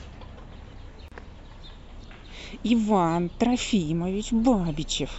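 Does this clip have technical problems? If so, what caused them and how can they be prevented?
Yes. A gap at a join of encoded pieces silences the speech for 34 ms, from 1.08 to 1.12 s, because encoder delay and last-frame padding stayed at the splice. To prevent it, trim each piece's encoder delay and end padding before joining, or encode the whole recording in one pass.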